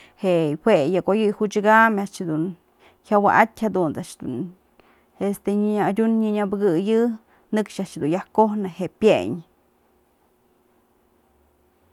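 No technical faults are audible anywhere in this speech recording.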